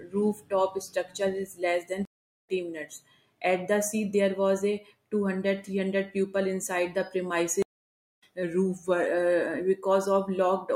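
At 2.05 s a stream reconnect drops the speech for 373 ms; a fresh decoder restarts mid-stream and resumes roughly 0.2 s later, skipping material. At 7.62 s a second reconnect silences 541 ms and rejoins about 0.3 s on. From 8.43 to 9.06 s playback slows 5.28% and drops 94 cents before snapping back, likely a drift correction step adjusting rate.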